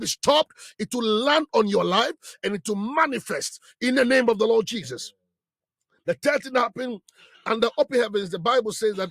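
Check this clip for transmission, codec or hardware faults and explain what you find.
No faults detected.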